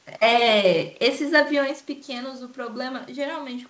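Speech recording; no technical faults are present.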